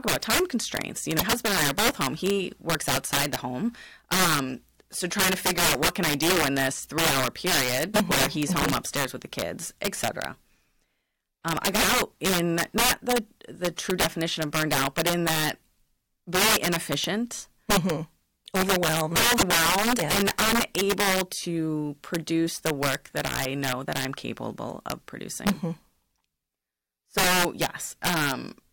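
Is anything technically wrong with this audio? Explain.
Yes. There are two kinds of fault.

Integer overflow runs through the whole speech clip. The level is pushed about 13 dB too hot. A few percent of samples exceed the integer limit and wrap to the opposite sign instead of clipping. Loud peaks become harsh, violent cracks.

Damaged data in a compressed stream appears twice, at 1.16–1.22 s, just before "husband and I are", and at 19.35–19.43 s, just before "yeah and unable to". Corrupted bytes make the decoder lose sync and hunt for the next frame. Each event is brief, about 0.05 s and 0.08 s long.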